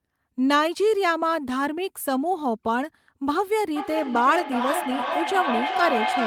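From 3.76 s to the end, a feedback howl near 700 Hz swells, pulsing about every 400 ms to about 3 dB below the speech: a microphone-loudspeaker loop gaining level each trip.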